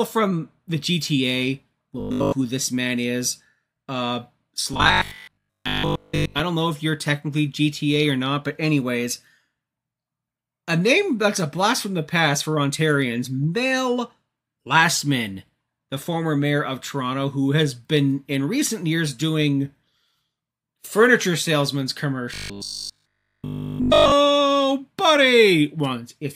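Fresh audio likely arrived too seldom, so the last 20 ms was looped to fill the gap, giving robotic sound from repeated short buffers: a rigid, metallic 50 Hz buzz from 2.00 to 2.32 s, 4.73 to 6.41 s (mostly repeated) and 22.34 to 24.12 s.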